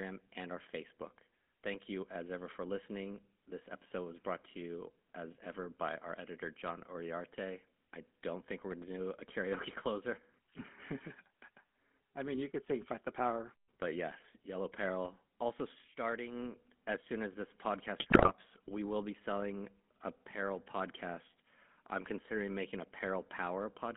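GSM full-rate codec damage runs through the entire speech recording: the band is confined to roughly 150 Hz to 3.5 kHz, and the pulse-driven vocal-tract model, consistent with a 13 kbps stream, leaves a plainly audible buzzy, gravelly roughness. GSM bit errors strike from 18.00 to 18.33 s, between "as soon as this" and "we will be selling", where corrupted filter, pitch and gain parameters distort the spectrum and level into squawks and gargling.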